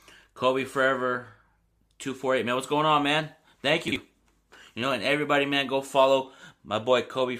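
At 3.88 to 3.96 s, chunks play out of order. One 40 ms chunk arrives a chunk late, so speech briefly jumbles across the hard joins.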